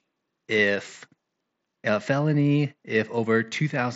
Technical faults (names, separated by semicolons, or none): none